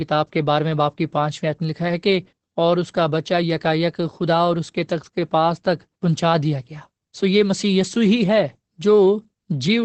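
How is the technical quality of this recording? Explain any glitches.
The speech carries plainly audible Opus voice compression for its whole length. Nothing is present above about 8.3 kHz, so sibilants and breath detail are dulled and the voice sounds muffled. The bandwidth and texture fit Opus running its SILK linear-prediction coder in wideband mode at a low bitrate, around 12 kbps. At that rate the excitation is coded coarsely, which leaves the voice hoarse and slightly robotic.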